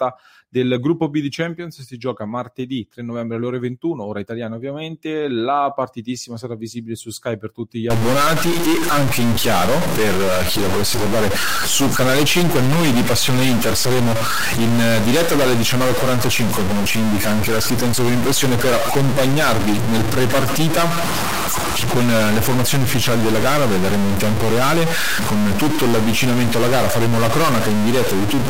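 From about 7.90 s, right after "per tutti gli", the speech turns harsh and buzzy and stays that way to the end. That's a stuck bit, likely one converter line jammed at a fairly high bit, around -15 dBFS, so pauses fill with loud noise too.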